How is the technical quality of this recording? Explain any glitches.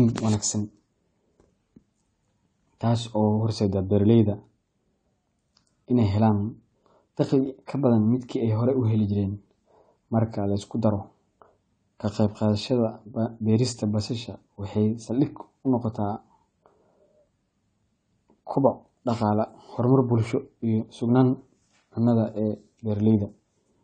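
The technical quality is compromised by plainly audible codec damage across the whole recording. AAC compression artefacts run throughout the speech. Nothing is present above 9 kHz, so the sound is dull. The missing top, smearing and fizzy sibilants are likely from AAC-LC encoding at a low bitrate, consistent with about 32 kbps. The encoder discards fine spectral detail to save data and lowers its cut-off.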